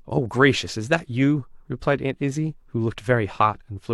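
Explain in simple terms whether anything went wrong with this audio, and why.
Nothing went wrong here: the speech signal stays steady and intact throughout, with no technical faults to be heard anywhere in it.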